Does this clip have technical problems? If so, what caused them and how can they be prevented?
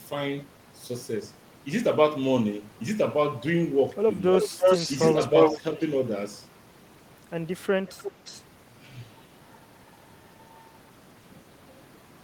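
Yes. Echo leak at 3.9 s, 4.36 to 5.6 s, 5.79 to 5.9 s and 7.87 to 8.43 s: a copy of the speech returns about 340 to 350 ms late. It is faint in the brief scraps, moderate near 8 s, and roughly as loud as the speech itself from 4.36 to 5.6 s. This likely comes from the far side playing the call on a loudspeaker, where the echo canceller let the microphone's pickup of that playback be sent back. A headset on that side, or a stronger echo canceller, would prevent it.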